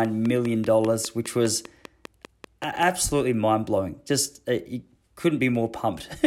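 From 0.05 s to 2.84 s, a train of clicks ticks at a steady 5 per second, around fifteen matching pops about 10 dB above the signal, stopping before "mind blowing". Unlike random crackle, their identical shape and even spacing point to likely electrical interference.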